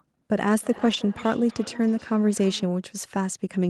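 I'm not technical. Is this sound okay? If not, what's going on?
No. From 0.61 to 2.9 s there is feedback echo between two devices: a second device in the room replays the call, its microphone picks that up again, and the sound returns faintly, roughly every third of a second, thinner and more ringing each time.

From 0.73 to 0.95 s you hear a lost packet rebuilt from error correction. Several small pieces of audio went missing, and the call filled them in from rough backup copies, so nothing drops out, but that stretch sounds grainier and noisier.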